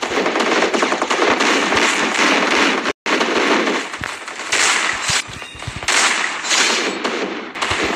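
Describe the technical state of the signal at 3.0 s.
At 3.0 s you're inside a playback stall: the sound cuts out from 2.91 to 3.06 s, roughly 0.15 s of silence, likely the player running dry or its thread getting blocked. Right after, from 3.06 to 4.50 s, there's time-compressed catch-up: the player trims and cross-fades small slices to run at about 1.1x, so things sound hurried at normal pitch.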